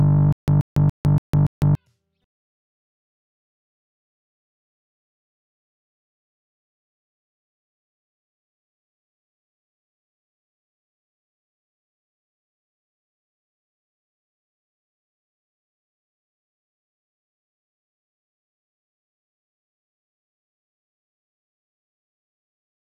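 From 0.33 s to 1.75 s the same short burst of sound, about 132 ms long, comes back five times at an even pace of one every 285 ms, each repeat followed by 154 ms of dead digital silence. This is a stutter with silent gaps, likely caused by the player or stream stalling and replaying its last fragment at each retry before running dry. The audio that belonged in that stretch is missing.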